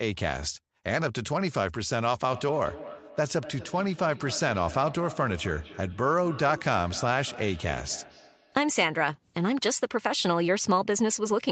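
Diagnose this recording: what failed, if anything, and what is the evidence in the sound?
Call processing let through a feedback echo between two devices. A second device in the room replayed the call, and the microphone recaptured it where the local echo canceller couldn't reach. From 2.31 to 9.11 s the speech returns roughly every 200 ms, thinner and ringing, peaking about 15 dB below the direct speech.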